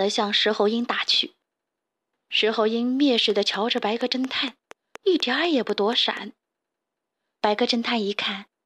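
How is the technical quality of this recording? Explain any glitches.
The recording has one clear glitch, a train of clicks. From 3.30 to 6.18 s, likely interference or a faulty connection injects a pulse about 4.2 times per second, regularly spaced, giving around fifteen similar ticks that peak roughly 5 dB above the speech.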